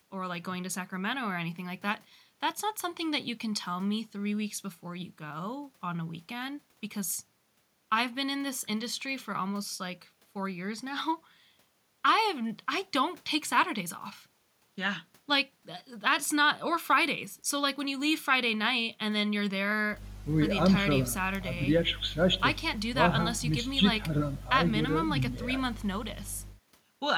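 No technical faults can be heard anywhere in this speech recording. Nothing in the audio calls for a timestamp or a comment on how the signal was handled.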